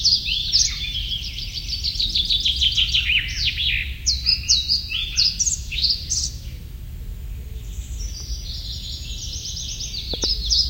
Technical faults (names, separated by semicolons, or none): loud pop